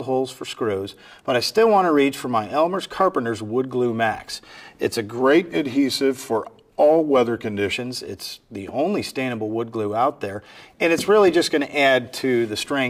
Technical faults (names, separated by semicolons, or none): wrong sample rate